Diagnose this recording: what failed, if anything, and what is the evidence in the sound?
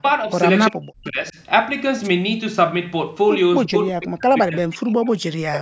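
The speech is cut down in two stretches, from 0.70 to 1.36 s and from 3.67 s to the end of the clip at about 5.6 s. Level drops by as much as about 40 dB, so the talker nearly vanishes for roughly two seconds in the second stretch. The cause is likely speech suppressed in double talk in the call's echo processing. When both ends spoke at once, the canceller could not tell the local talker from loudspeaker echo and attenuated everything.

At 2.03 to 2.08 s there is a brief burst of static, about 50 ms long: a wireless microphone noise hit in the analogue radio link before the converter. Multipath reflections momentarily cancelled the FM carrier, so receiver noise rose over the signal and swept through as a short swish. This happened ahead of the call microphone processing, whose band limit leaves nothing above 8 kHz.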